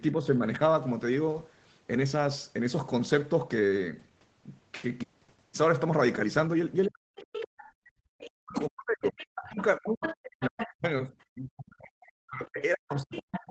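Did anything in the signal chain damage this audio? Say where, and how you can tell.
Yes. From 6.83 to 10.68 s, and again from 12.45 to 13.4 s, a second, fainter voice sits under the main talker, roughly 10 dB below it in the first stretch and about 15 dB down in the second. This is the other side's voice leaking through. It is likely loudspeaker playback reaching the microphone that the call's echo canceller, a call-processing stage, failed to remove.

The talker's own speech collapses while that second voice is present. It drops by roughly 40 dB for about 0.3 s between 6.87 and 7.17 s, then is pushed down again from 8.38 s to the end of the clip. This is speech suppressed in double talk. With both sides active, the canceller likely could not separate near-end speech from echo and attenuated everything, so the wanted voice is chopped along with the leak.

Between 7.72 and 8.1 s the room sound itself falls away by about 30 dB for roughly 0.4 s and then returns. 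That is background gated by the echo canceller. While the loudspeaker was playing, the canceller clamped the microphone path hard, and the ambience vanished until it released. The bandwidth stopping at 8 kHz comes from the call microphone processing and the Opus call path. It is not part of this damage.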